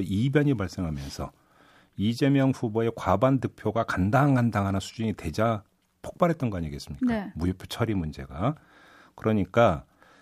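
No technical faults can be heard anywhere in this speech recording.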